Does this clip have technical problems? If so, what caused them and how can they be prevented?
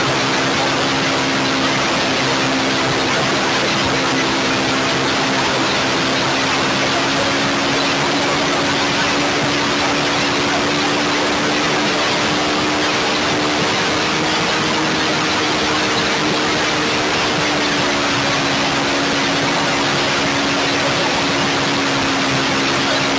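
No, the only thing to note is the call microphone processing, which is working as intended, trimming the lowest bass and leaving nothing above 8 kHz.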